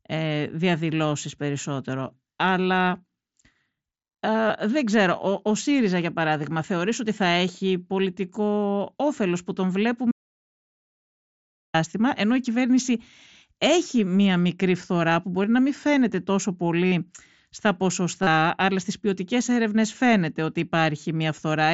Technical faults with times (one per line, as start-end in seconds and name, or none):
4.48 concealed Bluetooth headset packet loss
10.11-11.74 audio dropout to silence
15.43 concealed Bluetooth headset packet loss
16.86-16.92 concealed Bluetooth headset packet loss
18.23-18.27 concealed Bluetooth headset packet loss
21.36 concealed Bluetooth headset packet loss